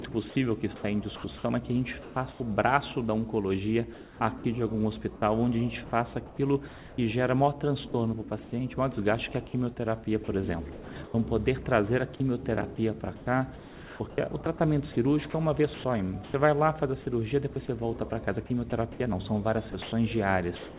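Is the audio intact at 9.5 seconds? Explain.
Yes, the audio is intact at 9.5 seconds, with no dropout, glitch or other fault at that moment, only the narrowband call sound that has nothing above 4 kHz.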